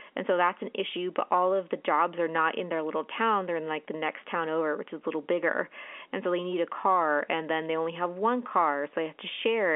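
At 2.37 s, between "of the jobs are" and "in their little town", there is a brief packet loss with pitch repetition. About 10 ms of speech went missing, which fits a single lost packet on the telephone line. The receiver filled the hole by repeating the last pitch period it had. Because the gap is so short, the result is a slightly held, buzzy tone rather than silence, over the narrow 300 to 3400 Hz telephone band.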